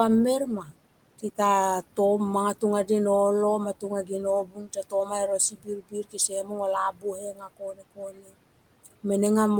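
Noise suppressor artifacts run through the whole clip: the suppressor pulls the steady room noise, sitting about 19 dB below the speech, down by about 18 dB frame by frame, so the background dips between phrases and swells under them.

Speech cut by the noise suppressor occurs at 0.63 to 0.72 s, 4.44 to 5.11 s, 5.5 to 6.58 s and 6.92 to 8.35 s. Mistaking quiet speech for noise, the suppressor drops it by about 9 dB early on and about 18 to 19 dB later, so softer stretches, up to roughly a second in the last span, sound swallowed.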